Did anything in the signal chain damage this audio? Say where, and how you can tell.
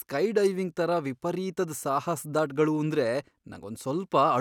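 No, nothing along the chain seems to have touched this speech recording, so there's no stage to point a finger at.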